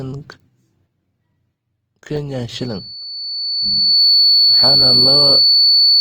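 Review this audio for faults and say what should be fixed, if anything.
Opus compression, throughout: the speech sounds rough and grainy, with bands filled in by noise instead of dropping out, which is the likely result of Opus in its music mode at a low bitrate, the damage fitting something near 24 kbps. Encoding at a higher bitrate, or keeping an uncompressed master, would prevent this.

Loudspeaker feedback squeal, from 2.52 s to the end at 6.00 s: a single 4.5 kHz tone swells over roughly a second and a half until it sits about 15 dB above the speech, because the microphone picks up its own loudspeaker and that frequency's loop gain exceeds one. Lowering monitor gain, moving the microphone away from the loudspeaker, or notching 4.5 kHz would prevent this.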